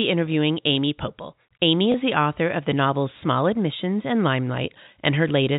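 At 1.92 to 1.94 s, a 20 ms stretch of the speech stream was lost, which fits a single dropped packet. Packet loss with pitch repetition bridged the gap by looping the last pitch period, so the speech briefly holds on a slightly buzzy tone before continuing.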